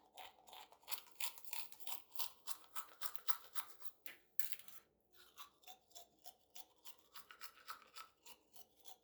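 From 0.92 to 4.78 s, pre-emphasis is left on. The treble was boosted and never cut back. Highs sit about 13 dB up at 10 kHz relative to 1 kHz, matching the 75 µs FM curve. The sound turns thin, bright and hissy.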